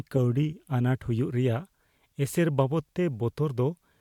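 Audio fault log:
No audible faults found.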